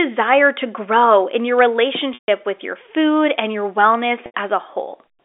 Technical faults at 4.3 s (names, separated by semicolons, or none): packet loss with pitch repetition